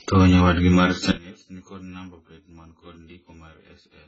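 From the very start the speech has that dull, smeared quality of AAC compression, likely AAC-LC pushed very hard. Nothing comes through above 7.6 kHz, and the damage is heavy. The sibilants go fizzy and sustained sounds warble where the encoder has thinned out or patched over whole bands. All of that points to a very low bitrate, in the region of 12 kbps, where the hearing model is throwing away most of the detail.

Then, right after "nyawadgi mar" at about 1.1 s and running to the end at about 4.1 s, the level collapses by about 24 dB. That's the signature of one channel inverted. One side's polarity is likely flipped, so when the two channels fold down to mono the centred speech cancels itself. What's left is just the small difference between the channels, a faint ghost of the voice sitting far below where it was a moment earlier.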